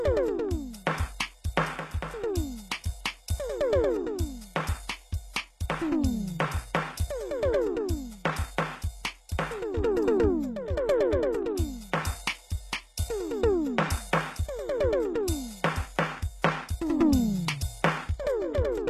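Throughout the music, the audio was likely squeezed through HE-AAC compression at a bitrate low enough to suggest about 16 kbps, so the treble is rebuilt from copied lower bands. Nothing reaches above 12.3 kHz, and the top end sounds plainly gritty and metallic.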